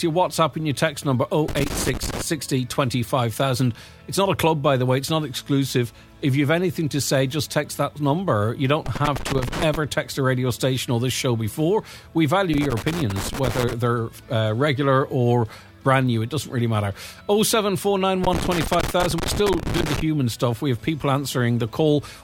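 Loose connector crackle breaks in four times: 1.48 to 2.22 s, 8.86 to 9.75 s, 12.54 to 13.73 s, and 18.24 to 20.01 s. Each burst is longer than the last, growing from under a second to nearly two. A worn or dirty contact is making and breaking as it shifts. The signal is chopped into fragments. The result is ragged, irregular scratching over the sound.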